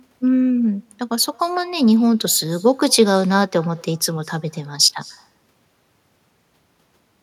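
A speech clip with an echo with no canceller running through its whole length: each phrase is followed roughly a fifth of a second later by a copy about 27 dB below the speech. The far end is playing the call over a loudspeaker, its microphone picks that sound up, and nothing removes it before it returns. On a spectrogram every syllable's harmonic pattern repeats as a much dimmer duplicate shifted right by about 0.2 s. On the waveform each burst trails a low-level tail of the same shape.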